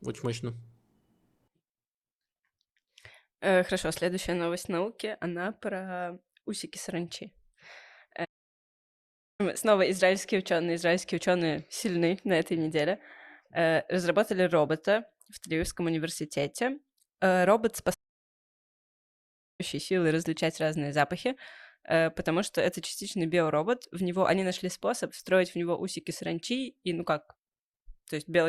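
Speech that suffers two playback stalls, going silent mid-flow from 8.24 to 9.41 s and from 17.94 to 19.61 s, about 1.15 and 1.65 s, likely from the player starving for data. Unlike a brief dropout, each silence lasts over a second.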